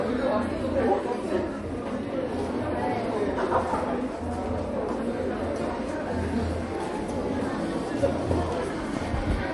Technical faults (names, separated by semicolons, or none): MP3 compression